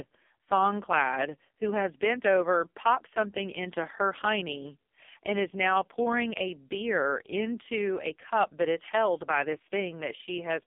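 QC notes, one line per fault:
Throughout, AMR narrowband mobile codec: heavy damage from a sparse pulse-driven vocal model makes speech buzzy and synthetic, consistent with the lowest 4.75 kbps mode; nothing above 3.5 kHz passes.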